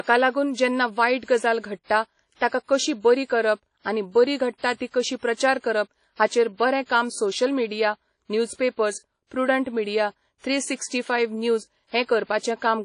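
WMA compression, running throughout the speech, is the likely cause of the damage heard here. A transform codec of this kind encodes the sound in long blocks, so quantisation noise smears across tens of milliseconds around each syllable, and weak spectral lines are discarded outright. The result is a plainly audible ringing, washy texture with hiss that swells and fades with the signal, and nothing is left above 10.1 kHz, which fits a bitrate near 32 kbps.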